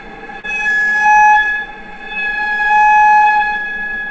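At 0.40–0.45 s, short concealed packet loss leaves a brief smeared wobble where about 34 ms was filled in by extending the previous sound. On a spectrogram it appears as a stretched, blurred patch. The audio passes through a call codec with nothing above 8 kHz, which fits G.722.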